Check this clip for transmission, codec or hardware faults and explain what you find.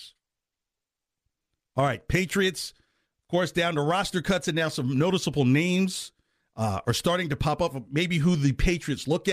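There is nothing in this recording that points to a fault. Listening closely across the whole clip, no event stands out that would need explaining.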